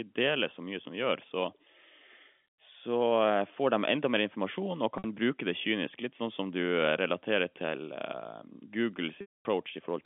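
Telephone-band speech, with G.711 coding audible only as the 200 Hz to 3.5 kHz line band, shows packet loss with pitch repetition twice. A 60 ms gap at 4.98 to 5.04 s, just before "bruke det kynisk", becomes a brief buzzy hold. A 240 ms loss at 9.21 to 9.45 s repeats the last pitch period, fades to silence, then cross-fades back.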